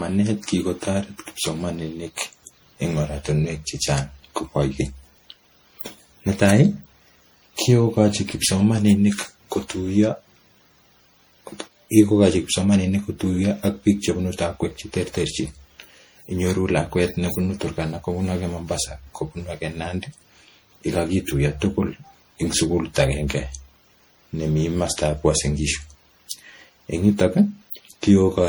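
Throughout the speech, the audio has likely been through repeated MP3 encoding, around seven passes at a rate consistent with 64 kbit/s, each requantising on a shifted frame grid. This generation loss leaves the sound swirly, hollow and smeared, with blurred consonant attacks.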